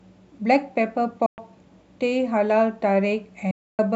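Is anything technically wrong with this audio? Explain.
Yes. There are Bluetooth dropouts at 1.26–1.38 s and 3.51–3.79 s, likely from wireless packets reaching the headphones too late and being discarded. The speech drops to silence for about 116 ms, then 276 ms, and resumes further along, as though it had kept playing.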